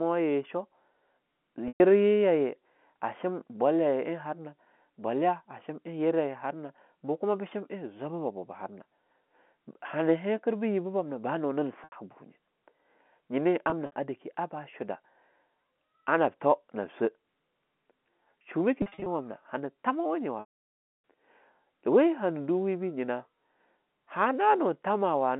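Packet loss with pitch repetition occurs at 1.68 s, 11.84 s (just after "bam nah ba nunin"), 13.64 s, 18.82 s and 20.4 s (after "tamawa nye"), the last being the longest. The receiver fills each gap by repeating the last pitch cycle. Unlike a plain dropout's abrupt silence, these sound like a brief, buzzy held tone that fades away.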